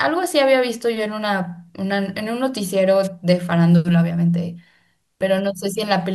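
At 3.03 s a short swish of static, about 50 ms long, cuts across the speech and clears by 3.08 s. This is a wireless microphone noise hit. The analogue FM radio link from the microphone faded for an instant as reflected signals cancelled the direct one at the receiver. With too little signal to hold, the receiver's own noise rose up briefly before the signal recovered.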